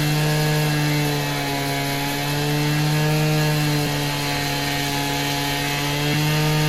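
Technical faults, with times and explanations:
3.83 to 3.87 s and 6.13 s, damaged data in a compressed stream: corrupted bytes make the decoder misread frames and resync, giving a short chirp, squawk, click or hole.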